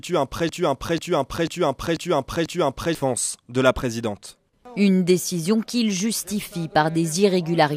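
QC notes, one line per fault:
0.49–2.95 s, broken-record loop: a 0.49 s fragment of the audio repeats identically, back to back, five times, so the material that belonged in those 2.5 s is gone. The likely cause is a stalled player, encoder or stream re-sending its last buffered piece.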